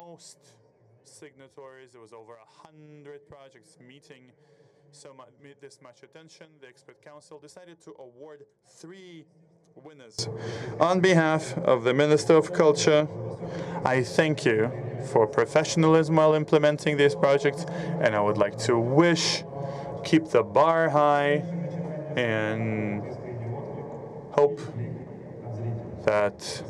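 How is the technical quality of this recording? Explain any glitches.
The first ten seconds have a serious fault. From 0.0 to 10.19 s the level drops by about 27 dB when heard in mono. Whatever sits in the centre nearly disappears, background included. What remains is faint, like a quiet copy of the full sound. The likely cause is one channel inverted. One stereo channel has flipped polarity, so the shared content cancels when the two are summed.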